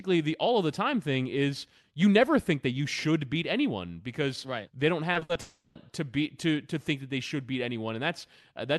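From 5.13 to 5.37 s the speech turns choppy, with pieces missing. This is repeated packet loss (robotic sound): four gaps, the longest 60 ms, each patched by continuing the last sound, so half of that quarter-second is concealed rather than real audio.

Right after, from 5.41 to 5.77 s, the sound stretches into a fading buzz or hiss, then drops to silence for about 40 ms before resuming with a chunk absent. The likely cause is a long network dropout, where roughly a third of a second never arrived.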